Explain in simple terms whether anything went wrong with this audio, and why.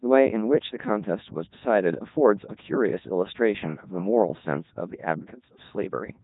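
The speech went through Codec 2 vocoder, a very low-data system built for digital radio. Instead of sending the actual sound wave, it sends only a rough summary: how high the voice is pitched, how loud it is, and its general tone colour. The receiving end then rebuilds a voice from simple tones. Because of this, the speech sounds robotic and buzzy from start to finish, with heavy damage, and nothing is heard above about 3.8 kHz, so it also sounds dull.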